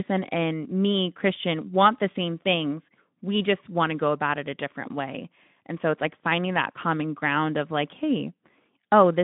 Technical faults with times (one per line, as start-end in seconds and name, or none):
none